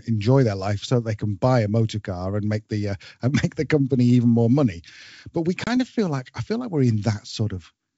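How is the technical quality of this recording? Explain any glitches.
The recording has one clear glitch, a packet loss on an ADPCM call, heard in this G.722 wideband speech at 64 kbit/s.

At about 5.64 to 5.71 s, just after "more money but we" and before "of feel like i", the sound drops out abruptly. About 30 ms of audio, a few packets' worth, went missing and was filled with silence. Because ADPCM codes each sample as a change from a prediction, the receiving decoder's predictor and step size no longer match the sender's when the audio resumes. The speech therefore comes back slightly distorted, then settles within some tens of milliseconds. That mistracking after the gap is what tells it apart from a simple dropout, which would resume cleanly, and from concealed loss, which would leave no hard-edged hole.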